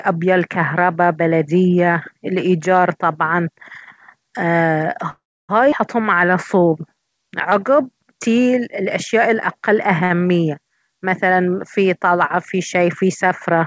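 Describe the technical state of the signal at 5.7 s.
At 5.71 to 5.74 s the speech jumps forward: a skip ahead, where roughly a fifth of a second of audio never plays, likely discarded when the jitter buffer overflowed with later packets already queued. Only about 10 ms of fill bridges the cut, so the two sides butt together almost directly, heard as a clipped, hurried join. On a waveform the envelope changes abruptly at that point. A spectrogram, already empty above 8 kHz from the call codec, shows a hard vertical seam.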